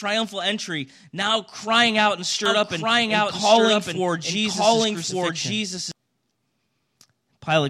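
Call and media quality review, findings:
Doubled audio track, 2.46 to 5.92 s: likely a second, slower capture path mixed in. Full-band copy trails by about a second at similar level, starting and stopping abruptly.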